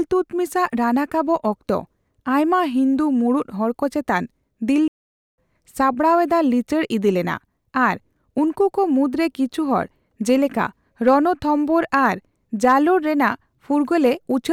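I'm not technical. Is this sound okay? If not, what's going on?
No, there are two separate problems in this speech clip.

The first is a playback stall. At 4.88 seconds the sound just stops dead for about half a second, then picks up again at 5.38 seconds. It's not a natural pause; it's a hole in the middle of the flow. The likely cause is that the player briefly ran out of audio to play, or got held up doing something else, and went silent until it caught up.

The second is hard clipping, which turns up three times: at 11.07, 11.94 and 12.64 seconds, each lasting roughly a tenth of a second. At those moments the voice got a bit louder than the recording could handle, so the tops of the loudest bits were chopped off flat. That's what you hear as a short, gritty crackle on those peaks. It's only slightly over the limit, so it's quick and rough rather than a constant fuzz.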